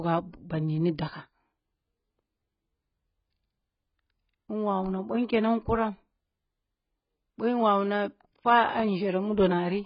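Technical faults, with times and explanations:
Throughout, AAC compression: the speech sounds dull and smeared, with nothing above 5.3 kHz. Sibilants come out fizzy and warbling. The coder has pulled its cut-off down and starved the spectrum of bits. The damage is heavy, likely from AAC-LC at about 12 kbps.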